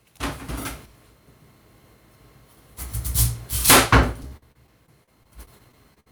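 From 4.23 s to 6.08 s there's repeated packet loss: about a dozen brief dropouts, the longest around 57 ms, each patched by stretching the previous sound, so it turns choppy and robotic.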